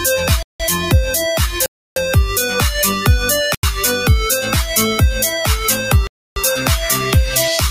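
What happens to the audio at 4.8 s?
At 4.8 s you're hearing the same thing that runs through the whole clip: a noise suppressor applied to music or sounds. A speech-tuned suppressor was left on, so it treats sustained tones and room tails as noise and pulls them down while transients slip through. The level swings by roughly 5 dB, so held parts sag and recover, giving that pumping, fluttery, thinned-out quality right there.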